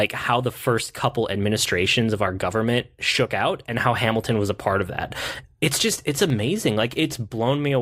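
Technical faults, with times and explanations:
6.30 s, block of digital silence: the speech drops to silence for about 0.67 ms, which fits a 32-sample buffer left unfilled in time. The signal cuts out and returns without any fade, so the two abrupt edges merge into a single brief tick.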